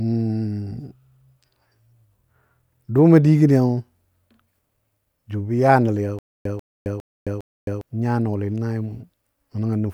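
Stutter with silent gaps, 6.19 to 7.81 s: a 141 ms burst of speech repeats four times every 406 ms, separated by 266 ms of dead digital silence. Playback likely stalled and replayed its last fragment at each retry, losing the speech meant for that span.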